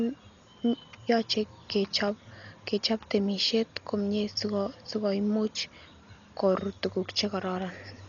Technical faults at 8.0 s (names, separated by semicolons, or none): Dolby Digital compression